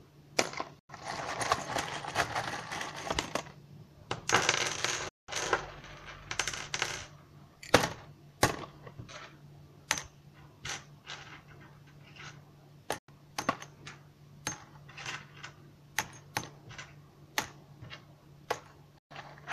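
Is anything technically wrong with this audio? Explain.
Yes, there is a digital broadcast dropout. At 0.79, 5.09, 12.98 and 18.98 s the receiver lost valid frames and muted until good ones returned, so the sound snaps to silence within about 3 ms for roughly 0.1, 0.2, 0.1 and 0.12 s, and that material is gone.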